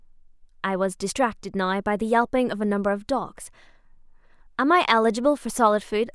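No technical faults can be heard anywhere in the speech; the signal stays continuous and steady throughout.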